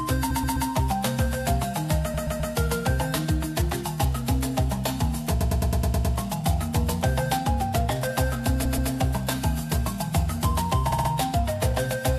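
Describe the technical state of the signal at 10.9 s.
At 10.9 s you hit repeated frames, running to about 11.09 s. A 64 ms chunk of the compressed stream gets played three extra times, so the sound stutters on the same slice, which fits a few frames being sent again, and the clip stretches by 192 ms.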